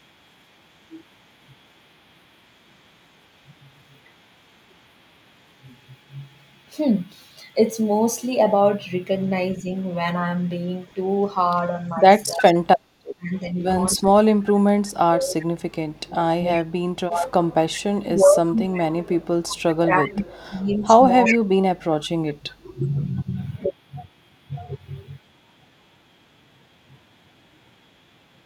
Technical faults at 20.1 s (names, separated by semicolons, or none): speech suppressed in double talk; echo leak